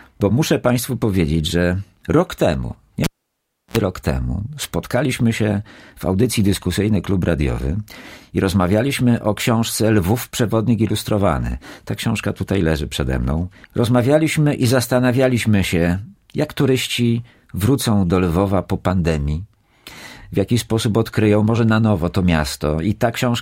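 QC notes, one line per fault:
3.04–3.77 s, cable pulled and plugged in: a pop, 0.68 s near silence, then a 61 ms 60 Hz mains buzz while only the tip touches, and a second pop on reconnection.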